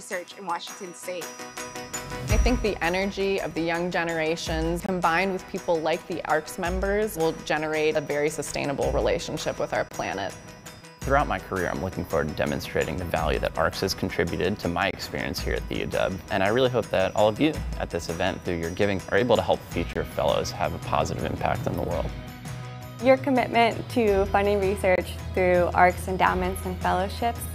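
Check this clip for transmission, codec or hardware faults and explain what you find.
One fault is present: a gap between chunks, recurring five times. The audio was delivered in 5-second chunks, and silence was left at each join, leaving a hole of about 23 ms before the next chunk starts. No material is lost, but the sound stops dead and resumes at 4.86, 9.89, 14.91, 19.93 and 24.96 s. The regular 5-second spacing makes the dropouts sound like a steady, mechanical stutter.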